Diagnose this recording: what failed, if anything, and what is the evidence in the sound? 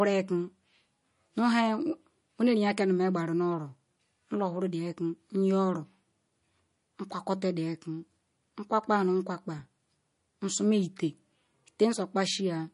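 The codec stage was likely starved of bits: MP3 compression consistent with about 40 kbps cuts everything above 10.6 kHz, leaving watery, swirling speech throughout.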